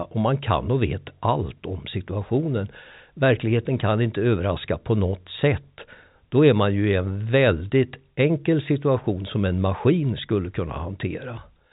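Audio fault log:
No faults are heard in this speech clip. It comes through G.711 telephone coding, with nothing above 3.8 kHz, which fits 64 kbps mu-law telephone audio.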